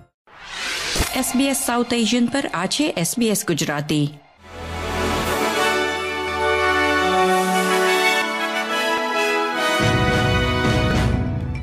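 From 6.28 to 8.22 s, a second full-band copy of the sound runs about 150 ms behind the first. It is about as loud as the original. It has no decay or room colour, and it starts and stops abruptly. This doubled audio track likely comes from the signal being captured a second time through a slower path.

At 8.98 s and again at 10.91 s, the sound jumps ahead with no silence in between. These are likely dropped buffers from an overrun. The samples were overwritten before the program read them, so the audio on either side was joined directly. About 10 ms is lost at the first point, and a few milliseconds at the second.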